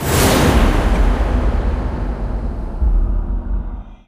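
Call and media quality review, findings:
Short glitch at 0.95–0.97 s, one damaged frame. Corrupt frame decoded: flipped bits, decoder played it anyway. Misplaced energy peaking around -5 dBFS. Probable component: codec decoder.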